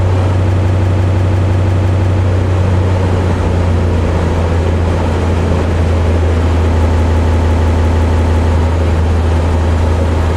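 A system hang loop runs from 0.51 to 2.22 s and again from 6.83 to 8.53 s. Each time, the system stalled while the sound hardware kept replaying the same ring buffer, so one 170.67 ms slice repeats exactly ten times, which fits an 8192-sample buffer. At a 5.86 Hz repeat rate this is a slow machine-gun stutter. When playback recovers, it continues with essentially nothing missing.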